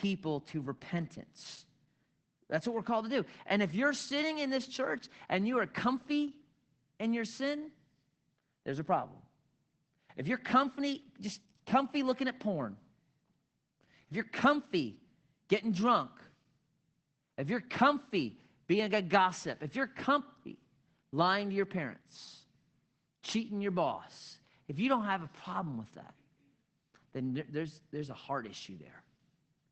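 From start to end, the speech carries Opus voice compression: the band stops near 8 kHz, leaving a hard empty ceiling on a spectrogram. Coarse SILK excitation coding makes the speech muffled, hoarse and faintly robotic, which fits a low rate around 12 kbps.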